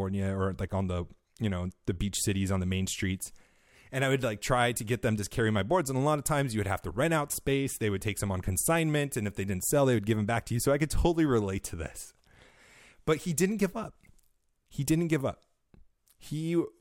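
Nothing stood out on listening to this speech recording.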